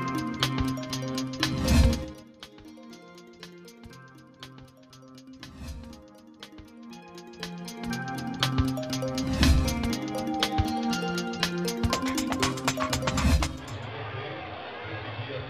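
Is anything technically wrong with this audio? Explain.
Yes. Zipper noise appears twice, from 1.86 to 2.32 s and again from 13.28 to 13.75 s. Each time the level drops by about 20 dB in 4 dB jumps, around ten a second, instead of sliding down continuously. Every jump puts a small click into the signal, so a ticking rides on the sound during each fade. A waveform shows a staircase envelope, and a spectrogram shows thin vertical broadband lines at each step.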